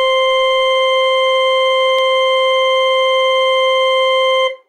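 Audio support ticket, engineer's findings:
Dropped samples in the music stream at 1.99 s, likely a brief buffer handoff glitch losing a handful of samples. Waveform jumps, giving one sharp click.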